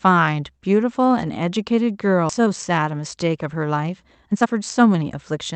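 At 2.29 to 2.31 s the speech makes a skip ahead: about a second of audio never plays, and the two sides are butted together with no silent gap. That seamless splice, rather than a hole of silence, separates it from an ordinary dropout.

Jitter buffer speed-up follows from 2.39 to 3.12 s at 112% speed, then from 3.89 to 5.51 s at 122%. The receiver trimmed pitch-period-sized slices to shed a backlog, so the speech sounds rushed while its pitch stays put, unlike a resampling speed change.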